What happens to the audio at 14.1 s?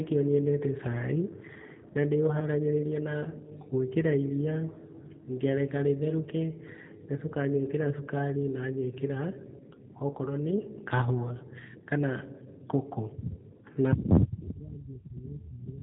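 G.729 codec coding is present at 14.1 s, as it is across the whole clip. The speech is rebuilt from a vocal tract filter, pitch predictor and sparse pulses, consistent with an 8 kbit/s stream, so nothing above 4 kHz survives and the speech sounds plainly rough and synthetic.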